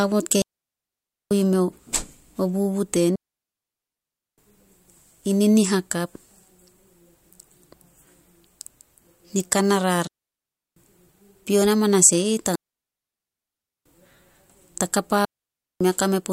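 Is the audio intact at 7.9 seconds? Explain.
Yes, the speech at 7.9 seconds is intact, with no dropout, click, distortion or other fault at that moment.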